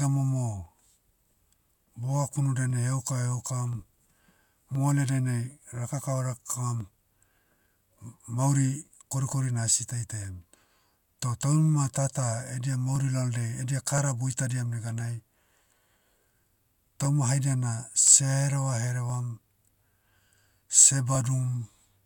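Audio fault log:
0.66–21.15 s, clock drift buffer slips: a regular click about every 1.03 s, some twenty in all, heard over the speech, likely from two devices running on separate clocks that differ by roughly 700 ppm, so the buffer between them overflows or runs dry and a block of around 30 samples is dropped or repeated each time. On a spectrogram this appears as thin vertical broadband lines evenly spaced; the waveform shows small step discontinuities at each slip.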